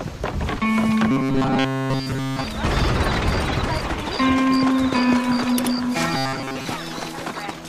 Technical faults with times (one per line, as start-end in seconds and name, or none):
1.11-2.44 robotic sound from repeated short buffers
6.14-6.66 robotic sound from repeated short buffers